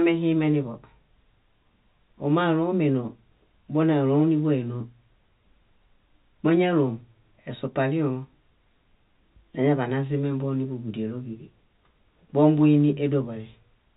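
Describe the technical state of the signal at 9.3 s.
At 9.3 s the speech is intact, with no dropout, glitch or distortion, only the narrow telephone band of the call path, which stops at about 4 kHz in a way that fits G.711 coding.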